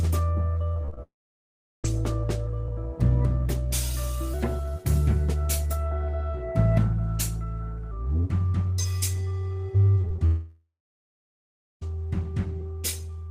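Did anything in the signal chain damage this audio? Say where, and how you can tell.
Yes. The damage is mostly at the network stage, plus one playback-speed fault.

Repeated packet loss (robotic sound) runs from 0.73 to 0.99 s. The audio turns choppy, with four separate holes, the longest 27 ms, patched by extending the preceding sound. About a third of that quarter-second is filled-in material rather than real signal. That is the pattern of packets arriving late or not at all, one gap after another, with concealment stitching each one shut.

The long network dropout comes twice, first at 1.03 to 1.86 s and again at 10.26 to 11.83 s. Each starts with a short continuation of the last sound that fades out, then falls to silence, about 0.74 s the first time and about 1.1 s the second. The audio resumes further along, with the missing stretch simply gone. The likely cause is a stall in the network stream, with the receiver's concealment giving up once the gap grew too long.

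The section at the wrong speed runs from 4.34 to 7.91 s. Everything there is hurried and raised in pitch by about two semitones, with speed and pitch shifted together. The section plays back 1.13 times too fast, most likely because it was clocked at the wrong rate during playback or editing, not because of anything in the source.

Short concealed packet loss appears in three quick bursts at 10.01 to 10.08 s, 10.08 to 10.12 s and 10.16 to 10.20 s. Each is a tiny smear or wobble where roughly 20 ms never arrived and the decoder bridged the hole by continuing the previous sound before blending back. In the first one, about 11 ms of real audio is lost outright. This cluster leads straight into the second long dropout.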